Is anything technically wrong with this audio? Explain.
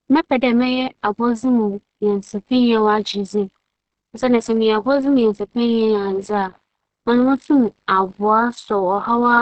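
Yes. Throughout the clip there is low-bitrate audio saved at a high bitrate. Nothing is present above about 8.7 kHz, and the speech carries the artefacts of heavy compression, although the file itself is a high-bitrate MP3. The likely cause is an earlier encode by a low-bitrate speech codec, which fits something like Opus at 16 kbit/s. The later high-bitrate encode kept that band limit and those artefacts and could not restore what was removed.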